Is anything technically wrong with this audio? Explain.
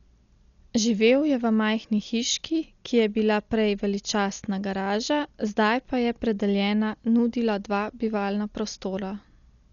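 Yes. Throughout the speech the band stops at 7 kHz and the sound is dull, with rough, fluttering noise around tonal parts. This is likely Dolby Digital compression at a low bitrate, consistent with about 48 kbps: the encoder narrowed the band and starved many frequency lines of bits, leaving dither noise in their place.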